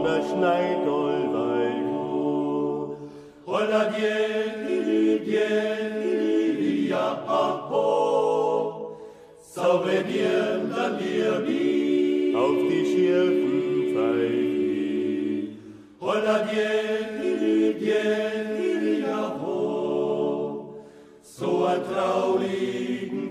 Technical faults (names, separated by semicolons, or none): none